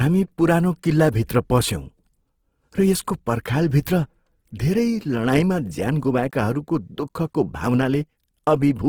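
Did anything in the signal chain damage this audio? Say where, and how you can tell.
Yes. Throughout the speech the sound is grainy and rough, with a noisy fizz in place of clean tone, yet the band reaches about 20.4 kHz. That points to the codec stage, likely Opus compression in its CELT mode at a starved bitrate near 16 kbps, noise-filling bands it cannot code.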